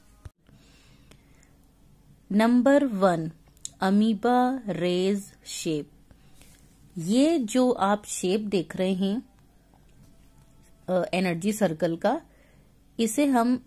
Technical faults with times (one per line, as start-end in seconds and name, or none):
none